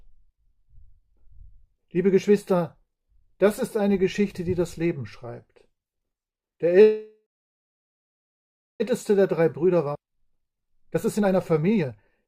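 At 6.81 s the stream was likely held up in transit, the jitter buffer ran dry, and a call audio freeze follows until 8.82 s. With nothing new to play, the receiver stretches the last sound into a brief fading buzz, then falls to near silence for about 1.55 s of the roughly 2 s gap. Nothing is lost. When packets resume, the audio picks up where it stopped, now running about 2 s late.

From 8.92 s to 12.27 s the jitter buffer speed-up works off that extra backlog. The receiver repeatedly cuts out tiny pitch-period-length slivers, removing roughly 0.7 s in total, so playback runs at about 121% of normal speed. Because the pitch stays where it was, the sound does not rise or turn chipmunk-like. It simply feels hurried and pressed forward through to the end.

In the middle of that catch-up, between 9.94 s and 9.97 s, there is a skip ahead. A chunk of audio is dropped while later audio was already waiting, about 0.7 s of it, and the material on either side is spliced together with only a few milliseconds of fill. 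This is heard as an abrupt forward jump, a sudden discontinuity where the sound lurches on without any pause to mark the missing stretch.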